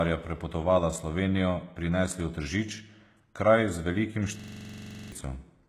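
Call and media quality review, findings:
HE-AAC compression, throughout: gritty, lispy sibilance, nothing above 12.4 kHz; likely a low-bitrate HE-AAC path rebuilding the treble from copied lower bands.

System hang loop, 4.40 to 5.12 s: one 42.67 ms slice repeats 17 times as a 23.4 Hz stutter. The driver froze while the hardware kept replaying the ring buffer, which fits a 2048-sample buffer.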